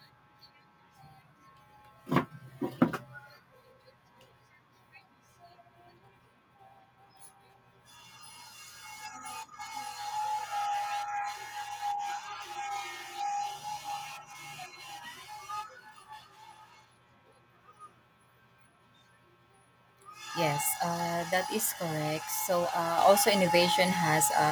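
A speech recording with one fault. At 22.98 s the microphone volume is stepped up by about 6 dB in a single jump. Voice and room background get louder together. The call software judged the input too quiet and raised the device gain at once.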